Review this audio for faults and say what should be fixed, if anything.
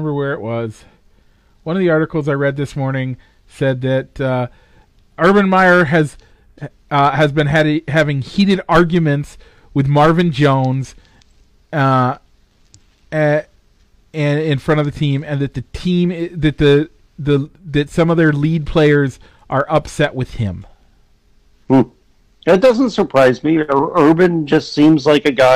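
Nothing needs fixing: no technical faults can be heard anywhere in the recording.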